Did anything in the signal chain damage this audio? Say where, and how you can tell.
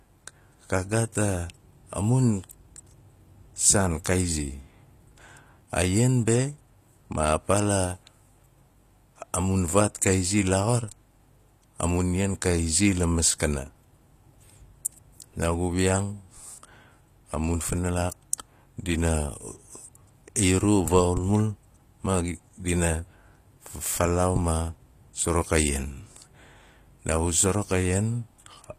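Yes, at the codec. Throughout, s sounds are gritty and metallic, with nothing above 14.9 kHz. Likely HE-AAC compression, copying lower bands upward.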